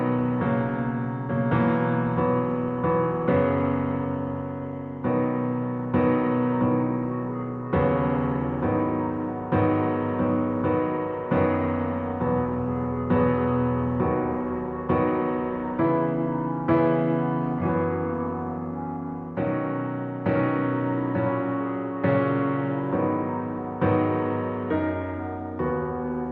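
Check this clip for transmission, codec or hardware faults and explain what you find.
No faults were found in this clip.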